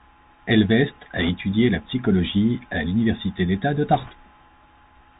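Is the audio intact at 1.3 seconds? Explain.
No. At 1.3 seconds the audio has just come out of a burst of bit errors on a Bluetooth voice link, running from 1.17 to 1.29 s and ending right before "la psychologie à". Flipped bits in the delta-modulated stream each nudge the waveform by a single step that grows with the speech level, and the adaptive step soon recovers, so an error rate of around one or two percent yields a brief rushing, crackly noise over the speech rather than sharp clicks. That absence of loud isolated pops sets it apart from packet loss or dropout glitches.

The moment also carries the Bluetooth CVSD headset codec heard across the whole clip, plainly audible and consistent with a 64 kbps CVSD link. Its one-bit delta modulation follows the waveform up or down with an adapting step, so nothing above about 4 kHz gets through, s sounds turn scratchy, and a granular hiss sits under the speech. 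That steady grain distinguishes it from the short crackling burst of the bit errors, which comes and goes within about 0.12 s.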